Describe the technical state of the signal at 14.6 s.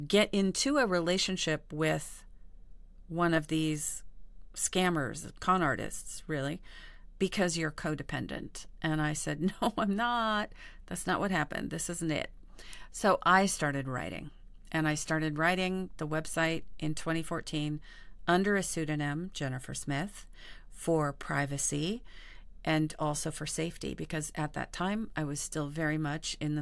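At 14.6 s the speech signal is intact, with no audible technical fault at that moment.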